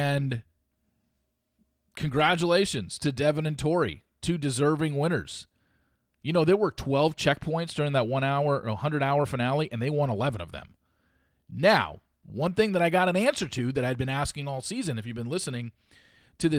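No faults: the speech passes through Opus voice compression in its hybrid mode, keeping the full audio band with only a light coding texture, and nothing in the signal chain breaks down.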